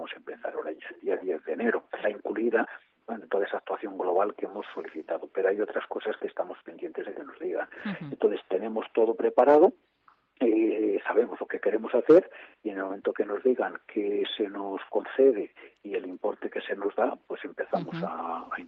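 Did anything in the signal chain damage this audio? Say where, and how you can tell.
Yes. The damage is in the network and jitter buffer stage of a call path. At 2.03 to 2.05 s the receiver hit a skip ahead: it discarded a stretch of queued audio, roughly seven tenths of a second, and jumped straight to later material with nothing filled in. You can hear the sound before and after splice together almost directly, with an abrupt discontinuity and no silence.

The jitter buffer was holding more audio than its target, so a jitter buffer speed-up follows from 2.13 to 4.21 s. The receiver repeatedly cut out short segments one or a few pitch periods long, removing about three tenths of a second in total. Over those two seconds the audio plays at 114 percent speed with unchanged pitch and sounds rushed. The call codec's 8 kHz top end is audible throughout.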